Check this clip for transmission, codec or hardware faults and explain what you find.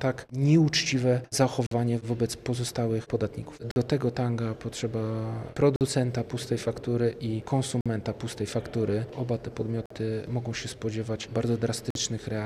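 There's one fault here, a gap between chunks, repeating through the clip. Silent holes of about 48 ms land at 1.67, 3.71, 5.76, 7.81, 9.86 and 11.90 s. The audio was delivered in 2-second chunks with dead air at every join, so you hear short dropouts on a steady beat, with no actual sound lost.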